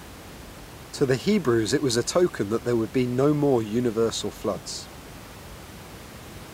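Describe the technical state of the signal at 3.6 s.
At 3.6 s the speech is intact, with only the room's own background noise sitting about 19 dB below it.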